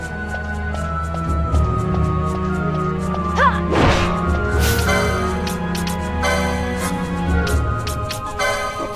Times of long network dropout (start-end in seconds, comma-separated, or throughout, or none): none